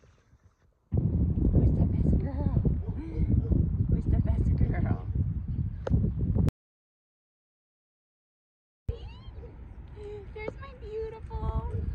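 From 6.49 s to 8.89 s the audio stops dead and is replaced by about 2.4 s of silence, an audio dropout to silence, before picking up again mid-flow. No room tone or noise floor survives in the gap, so whatever was happening then is simply lost. The likely cause is the input cutting out, through a disconnected device, a failed link or a mute, while the recorder kept writing zeros. On a waveform it appears as a flat line; on a spectrogram, a fully black vertical band with hard edges.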